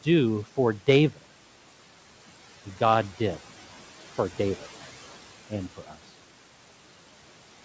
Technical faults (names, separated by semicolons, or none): speech cut by the noise suppressor